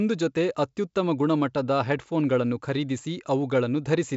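No technical faults can be heard in this speech, which comes through G.722 wideband telephone coding at 64 kbit/s with nothing above about 7.7 kHz.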